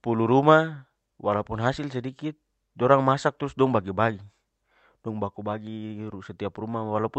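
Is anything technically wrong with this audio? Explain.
No, nothing technically wrong is audible in this speech.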